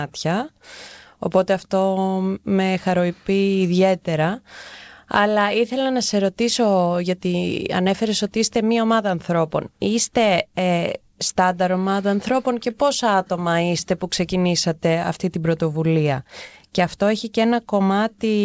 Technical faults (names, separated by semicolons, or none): none